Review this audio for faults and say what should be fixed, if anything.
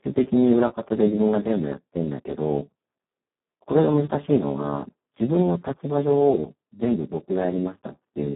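Speex codec damage, throughout the clip: the speech sounds hoarse, noisy and close to robotic, which fits Speex at its lowest quality settings, around 4 kbps, where too few bits remain to code the excitation. The band is confined to roughly 150 Hz to 3.4 kHz, with nothing above 3.8 kHz. To prevent it, record or transmit with a higher-bitrate wideband codec such as Opus instead of low-rate narrowband Speex.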